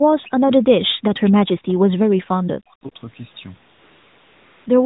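Speech carried over a narrowband mobile link, with a fault of the AMR comfort noise kind from 3.73 s to 4.66 s. For about 0.92 s the sending phone treated the talker as silent and stopped transmitting speech frames, so the receiver substituted a steady, smooth synthetic hiss built from a coarse estimate of background level and spectrum. The real ambience drops out and the artificial noise switches in and out at the boundaries. The lightly coded band-limited sound around it fits AMR-NB at its 12.2 kbps rate.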